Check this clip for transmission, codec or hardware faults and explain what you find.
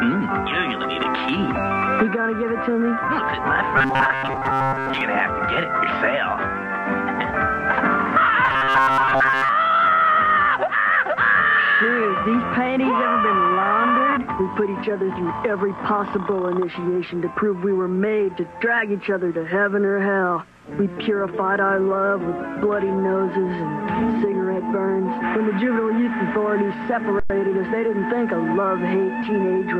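Two stretches of robotic sound from repeated short buffers occur, at 3.78 to 5.01 s and again at 8.45 to 9.50 s. New audio likely reached the playback side too seldom, so the software kept replaying its last fragment of about 7.5 ms while most of the real signal was skipped. That fixed repetition stamps a steady 134 Hz buzz onto the sound, making it rigid and metallic while its rough outline still comes through.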